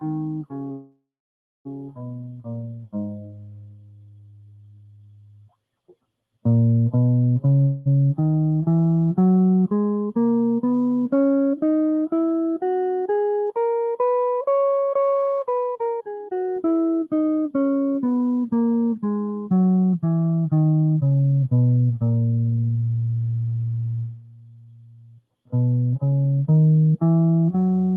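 From the very start the music passes through a noise suppressor applied to music, a speech-oriented processor that treats sustained tones and decays as noise. Its gain swings by around 20 dB. Attacks survive while held notes sink, so the music pumps and thins. A waveform shows an envelope that breathes independently of the playing. The top end stops near 12 kHz, which fits a low-bitrate call codec.

Between 0.00 and 5.52 s the effect is strongest as sound cut by the noise suppressor, dropping material by up to about 19 dB across roughly five seconds. Sustains and tails collapse soon after each onset, leaving brief hits followed by dullness. On a spectrogram, harmonic lines fade early and decays are clipped short, while vertical transient streaks stay bright.

At 0.71 to 1.67 s a call audio freeze inserts just under a second of filler. The last sound smears into a fading buzz or hiss, then about 0.61 s of silence, before the music resumes exactly where it stopped. 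Nothing is lost, but time is inserted. The likely cause is delayed packets draining the jitter buffer. A second, shorter freeze runs from 7.61 to 7.88 s, about 0.25 s with no silent stretch, heard as a brief smeared hold. Spectrograms show horizontally stretched, blurred bands and, in the first case, a blank gap. The waveform shows a decaying tail then, in the first case, flatline.

Jitter buffer speed-up follows three times, as the receiver trims pitch-period slices to shed accumulated delay. From 9.93 to 10.39 s it plays at 115% with about 70 ms removed. From 13.00 to 14.24 s it plays at 112% with about 150 ms removed. From 15.59 to 17.78 s it reaches 143% with about a second removed. Pitch holds, but the tempo lurches forward and rhythm feels rushed. Spectrograms show onsets compressed closer together with tiny splice discontinuities.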